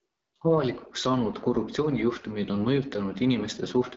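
Throughout, AMR wideband (HD Voice) coding leaves the speech rough and raspy, pointing to a low rate near 8.85 kbit/s. A spectrogram shows nothing above 7.8 kHz.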